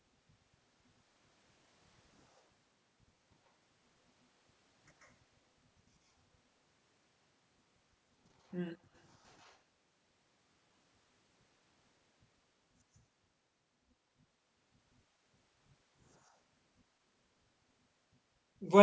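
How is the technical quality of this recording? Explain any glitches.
There is one brief glitch, in speech that has passed through a call's microphone processing with nothing above 8 kHz. From 9.44 to 9.49 s there is an echo leak. A very faint copy of the voice returns about 138 ms late. It is a short scrap. The likely cause is a loudspeaker on one side of the call whose echo canceller let some of its microphone pickup through and sent it back.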